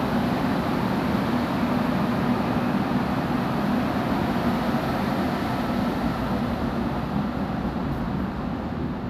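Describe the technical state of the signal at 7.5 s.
At 7.5 s the audio is intact, with no dropout, distortion or other technical fault audible at that moment.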